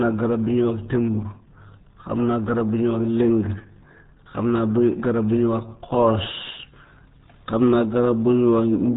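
From start to finish the speech has that unmistakable RealAudio 14.4 codec sound, the old dial-up streaming format. Everything above about 3.8 kHz is simply gone, so consonants lose their edge and the whole thing sounds boxed in and muffled. On top of that the damage is heavy: vowels come out gargly and watery, with a smeared, bubbling texture that fits a squeeze down to roughly 8 kbit/s.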